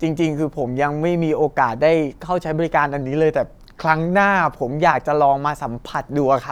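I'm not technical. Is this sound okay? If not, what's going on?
No. From 3.02 to 4.72 s the speech suddenly plays about 6% slower and drops roughly a semitone in pitch, then snaps back. This is a drift correction step, likely software keeping two clocks in step. Unlike a wobbly tape-style warble, it's one steady shift with clean edges.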